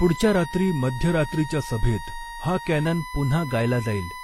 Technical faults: USB whine; transcoding between lossy codecs; drift correction step

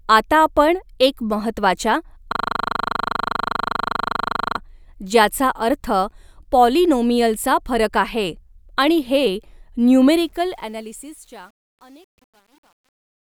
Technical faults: system hang loop; truncation distortion on a fade

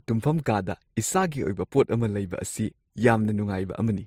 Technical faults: transcoding between lossy codecs

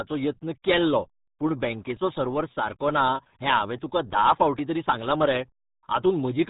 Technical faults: RealAudio 14.4 codec

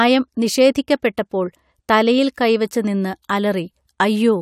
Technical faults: none

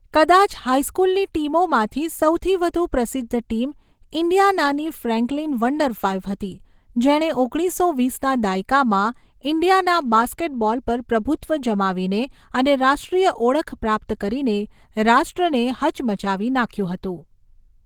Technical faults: Opus compression

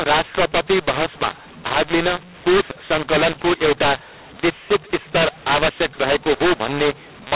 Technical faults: mu-law and A-law mixed up

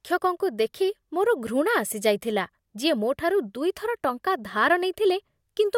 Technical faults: none

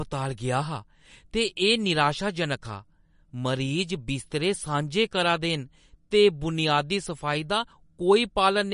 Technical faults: MP3 compression

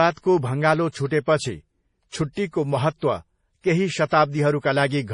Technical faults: MP3 compression; pre-echo

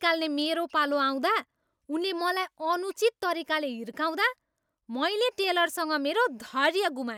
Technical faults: block size mismatch (truncated)

